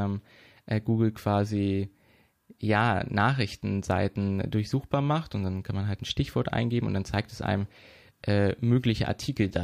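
No technical faults can be heard in this recording.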